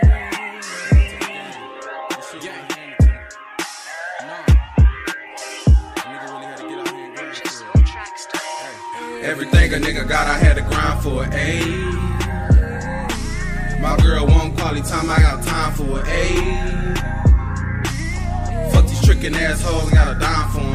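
There are no technical faults to describe at any point in the audio.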